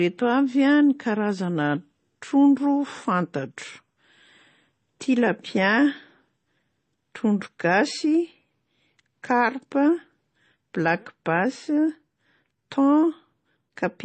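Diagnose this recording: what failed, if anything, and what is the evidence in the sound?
The failure is at the codec stage, throughout the recording: the speech has two distinct layers of compression damage, the artefacts of low-rate MP3 heard together with those of AAC. Nothing is present above 8.3 kHz, and that ceiling holds for the whole clip. This is likely transcoding between lossy codecs: the sound fits roughly 33 kbit/s MP3 re-encoded to AAC-LC at about 32 kbit/s. The second encoder wastes its bits reproducing the first one's artefacts and adds its own on top.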